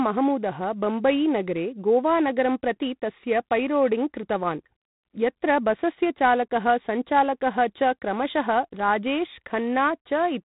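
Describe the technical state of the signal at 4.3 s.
At 4.3 s the speech carries G.726 ADPCM damage, present across the whole clip. Coarse coding of the difference from a running prediction adds a harsh, rasping hiss that rises and falls with the speech, unlike steady background noise, which fits the 24 kbit/s mode.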